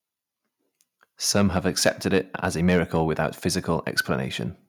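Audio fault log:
1.35–1.58 s, 1.86–2.18 s, 2.44–3.01 s, microphone overload: the loudest syllables turn harsh and crackly, roughly 2, 5 and 2 dB too hot, with about 0.7%, 1.0% and 0.7% of samples flattened. This is likely input gain set too high at the converter. It is unlike codec distortion because the grit follows only the peaks.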